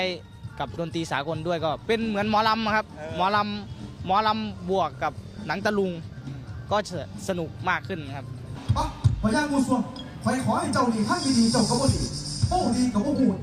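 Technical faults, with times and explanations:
No technical faults are audible.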